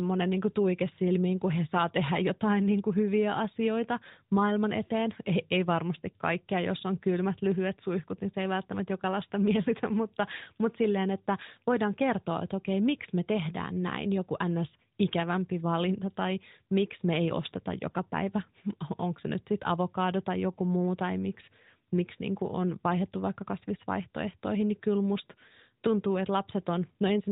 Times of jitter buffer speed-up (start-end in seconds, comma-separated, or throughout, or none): none